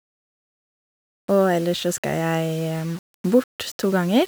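Grainy distortion that tracks the speech runs throughout, roughly 25 dB below it, likely low bit depth without dither, consistent with rounding to 6 bits.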